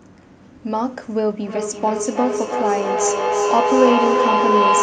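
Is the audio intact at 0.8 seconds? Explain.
Yes, at 0.8 seconds the speech plays through intact, with no audible fault at that moment.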